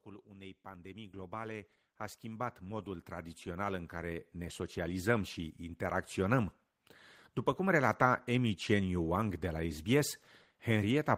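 This speech clip has automatic gain rising from 0.05 s to 5.2 s. Level control judged the input too quiet and lifted its gain slowly, by about 19 dB. Voice and background swell together. The climb ends just before "și interacționăm".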